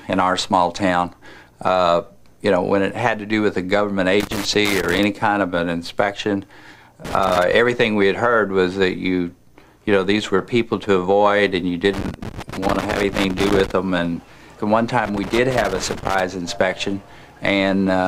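At 4.20 to 5.04 s an irregular burst of crackle and scratching cuts through the sound, the signature of loose connector crackle. A worn or dirty contact is making and breaking as it shifts, chopping the signal into fragments, with pops where any DC on the line switches on and off. The same fault recurs at 7.05 to 7.53 s, at 11.94 to 13.71 s (the longest episode), and at 15.05 to 16.21 s.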